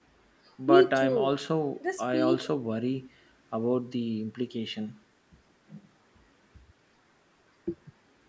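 Nothing here counts as a fault: the speech has simply been through a call's microphone processing, which trims away the deepest bass and leaves nothing above 8 kHz, and that's just how such a path normally sounds.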